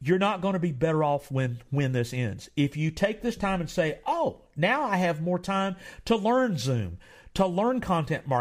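Nothing in this recording stands out as a technical fault: the speech runs along without any glitch, dropout or odd sound catching the ear at any point.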